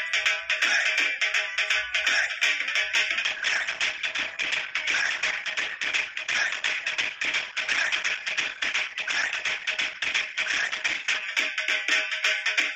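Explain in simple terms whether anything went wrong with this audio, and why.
From about 3.23 to 11.23 s the audio suddenly turns rougher, with more compression artefacts, with no gap: an adaptive stream at a lower bitrate, switching down while the connection struggled.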